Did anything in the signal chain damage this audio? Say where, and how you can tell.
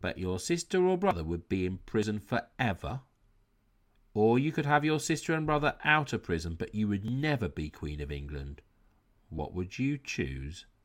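Yes, likely a dropped buffer (overrun) at the driver stage: small forward skips at 1.11, 2.03, 2.90, 5.85, 7.08 and 9.39 s, where tiny slivers of speech vanish.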